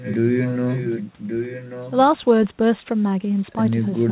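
Speech with echo leak: a delayed, fainter copy of the talker's own voice sits behind the speech from 0.00 to 0.17 s and again from 0.34 to 1.91 s, trailing by about 1.14 s. The later stretch is the stronger, roughly 10 dB below the speech. The likely cause is a far-end loudspeaker whose echo canceller let through part of what its microphone captured, returning it through a telephone-band path that stops near 4 kHz.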